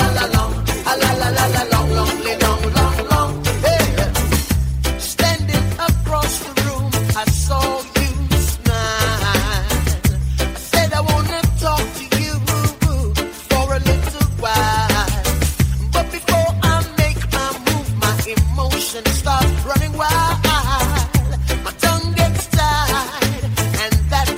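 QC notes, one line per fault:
No technical faults can be heard anywhere in the signal.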